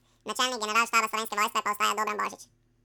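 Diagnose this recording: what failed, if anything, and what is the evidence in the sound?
The failure sits at sample-format conversion: the audio was read two samples at a time (double speed) for the whole clip. The speech runs at exactly twice its natural rate and sits a full octave, 12 semitones, higher. The reader took each pair of samples as a single frame, as if the stream were stereo or its samples twice as wide, so it consumed the data twice as fast. The exact 2x ratio, with speed and pitch locked together, fits this fault.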